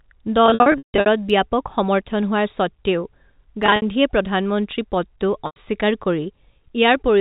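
Packet loss with pitch repetition hits three times over the telephone-band sound. From 0.46 to 1.06 s, about 400 ms goes missing in runs up to 160 ms, so the gaps turn buzzy and fade before "ব্যাপক সমৰ্থন হোৱাৰ স্বত্ত্বেও". Shorter held, buzzy blips follow at 3.66 to 3.82 s, just before "প্ৰধানমন্ত্ৰী পদটো", and at 5.46 to 5.56 s, right after it.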